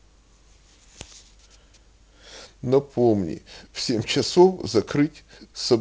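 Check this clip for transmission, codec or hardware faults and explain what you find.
Listening through the speech, nothing stood out as a problem.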